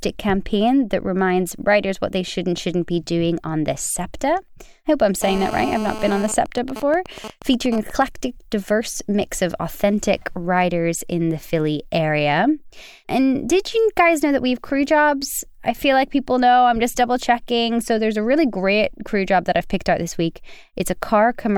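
Speech carries GSM phone buzz from 5.23 to 6.27 s. It is a hard, raspy buzz at 217 Hz, rich in harmonics, sitting about 11 dB below the speech. It has nothing to do with the talker. A 2G phone nearby is in a call and transmits in bursts 217 times a second. The audio circuit rectifies those radio pulses into sound. Because the call is active, the buzz stays nearly steady. Right after, from 6.28 to 8.02 s, come GSM signalling bursts. The steady buzz breaks into even ticks with a longer 217 Hz buzz twice a second. They sit roughly 10 dB below the speech. The phone is still in the call, but its user has fallen silent. It now sends only short groups of bursts, and the circuit rectifies each group into its own tick.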